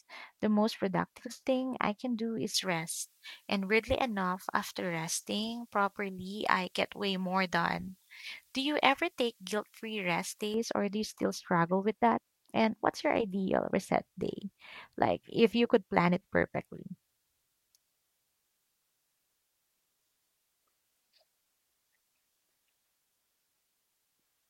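From 2.54 to 10.54 s, after "thing I can do" and until "or do you still", pre-emphasis was left on: the treble lift was never undone, which fits a J.17 curve. Around 10 kHz sits about 11 dB above 1 kHz, so the speech turns thin, bright and sibilant.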